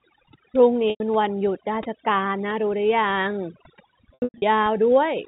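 Overdone noise removal runs through the whole clip. The suppressor cut any frequency band near its noise estimate, so quiet parts of the speech vanish with the hiss. On a spectrogram the background is near-black, dotted with isolated twinkling specks.

From 0.9 to 1.0 s, packet loss with pitch repetition bridges a 100 ms gap, which fits about five 20 ms packets. The receiver loops the last pitch period and fades it, heard as a brief buzzy hold. The waveform shows identical repeating cycles shrinking in amplitude.

From 4.14 to 4.42 s, the same fault returns as 220 ms of loss scattered over 280 ms, with the longest single run at 100 ms. Several short buzzy repeats and fades alternate with returning sound. On a spectrogram the harmonics flatten into straight, unchanging stripes, all confined below the 4 kHz ceiling of the telephone band.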